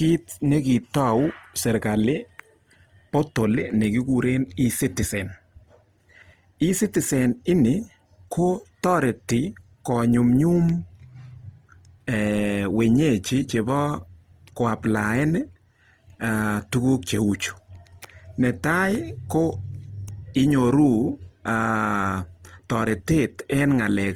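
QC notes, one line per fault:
throughout, Opus compression: the speech sounds rough, noisy and grainy, but without the swirling, watery holes of MP3. High content still reaches 20.2 kHz, so the band is full. The likely cause is Opus in its music mode, at a bitrate near 24 kbps.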